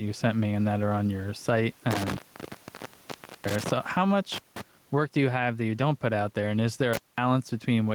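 Throughout, gain pumping makes the background swell by around 10 dB in pauses and duck under loud sounds, likely from excessive gain feeding a fast limiter; the waveform looks flattened. Intermittent contact cuts the line after "are on your site" at 1.91–3.71 s (open about 1.29 s), at 4.32–4.61 s before "work do you have" (0.18 s), and at 6.93–7.18 s after "there and is there" (0.21 s). Each cut is a crackle-edged gap with faint hiss, showing as vertical clicks around near-empty spectrogram bands.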